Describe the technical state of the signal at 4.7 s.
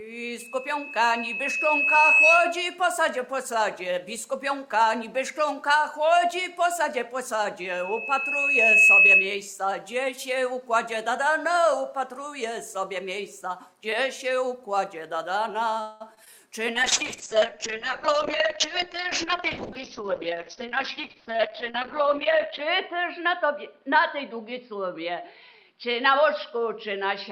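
At 4.7 s the signal is intact, with no dropout, distortion, glitch or other audible fault at that point.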